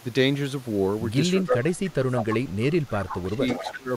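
From 1.37 to 2.36 s, the echo canceller likely could not separate the talker from loudspeaker echo while both sides spoke, so it turned the speech down by roughly 25 dB. This is speech suppressed in double talk, heard as the talker dipping and thinning for about a second. At 1.70 to 1.75 s, echo leak appears: the far end's canceller likely let some of its loudspeaker's output back into its microphone, and a faint copy of the speech returns about 335 ms late. From 2.86 to 3.43 s, the same double-talk suppression pulls the speech down by roughly 20 dB. Inside that span, from 3.10 to 3.26 s, a much louder echo leak follows, again delayed 335 ms and only about 10 dB below the speech. Another leak of the same strength runs from 3.47 to 3.80 s. A final brief suppression of roughly 20 dB, from 3.61 to 3.89 s, chops the speech while that echo is still sounding.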